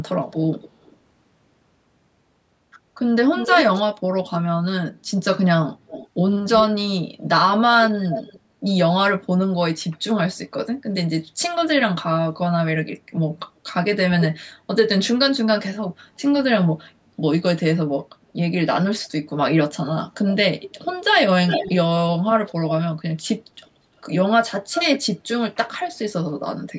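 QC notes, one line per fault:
0.31–0.96 s, 3.36–8.4 s, 14.2–16.72 s, 19.05–25.69 s: echo leak. A distinct repeat of the speech trails it by about 0.28 to 0.34 s. It is faint at first and nearly as loud as the speech later. This is likely a loudspeaker on the other side that the echo canceller didn't fully suppress. Room reverb would be a smooth decaying tail instead.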